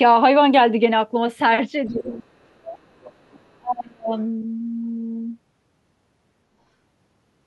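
Echo cancellation that likely left part of the far end's loudspeaker signal in the microphone lets the other side's voice leak through from 1.88 to 2.21 s and again from 3.01 to 3.55 s. It is a faint second voice, roughly 25 dB below the talker. Over 1.88 to 2.92 s and 3.56 to 4.12 s, the canceller likely failed to separate the talker from the echo during double talk and turned everything down. This speech suppression in double talk makes the voice sink by around 30 dB, then about 35 dB.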